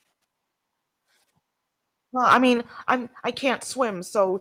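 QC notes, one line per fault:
0.35–0.37 s, skip ahead: A stretch of roughly 0.7 s of audio was discarded while later audio was already queued, and nothing was filled in. Playback leaps forward, and the two sides are butted together almost directly, so the sound lurches abruptly.
0.45–1.40 s, jitter buffer speed-up: The receiver was holding more audio than its target and trimmed short pitch-period slices repeatedly, taking out about a tenth of a second in total. The speech runs at 109% speed with unchanged pitch, sounding noticeably hurried.
2.29–2.37 s, microphone overload: The input gain was most likely set too high, driving peaks about 7 dB past the converter's ceiling. A modest share of samples are flattened at the limit, giving the loudest syllable a harsh, crackly, splattered edge.
2.58 s, microphone volume stepped down: Following the distorted peak, the call software likely reacted by cutting the device's input gain in a single move. 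Voice and background both drop by about 3 dB at once, a sudden step in level.
2.89–2.91 s, microphone overload: Even after the gain cut, one brief peak still exceeds the converter's limit by about 1 dB, most likely from the same over-hot input. Very few samples are clipped, so this produces a brief, harsh edge on that peak.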